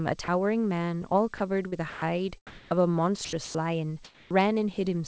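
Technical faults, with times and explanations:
0.24–0.28 s: sound dropped by the voice detector. 40 ms of speech gives way to steady comfort noise, likely because the sender's detector judged a quiet moment to be background and stopped sending.
1.38–1.40 s: sound dropped by the voice detector. A 20 ms gap where speech is replaced by flat synthetic noise, likely from the detector briefly cutting transmission before triggering again.
1.68–2.02 s: sound chopped by the voice detector. About 160 ms within this stretch is swapped for comfort noise in pieces, likely from the detector switching repeatedly, so the speech sounds choppy.
2.47–2.71 s: comfort noise in place of the background. For 240 ms, the detailed background is replaced by featureless synthetic noise about 26 dB below the loudest speech and about 1 dB louder than the real background, likely from discontinuous transmission during a pause.
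3.25–3.55 s: sound chopped by the voice detector. About 180 ms is replaced by comfort noise in separate bursts, likely from the detector toggling between sending and not sending.
4.05–4.31 s: comfort noise in place of the background. For 260 ms, steady synthetic noise about 28 dB below the loudest speech and about 1 dB quieter than the real background takes its place, likely because the sender stopped sending during silence.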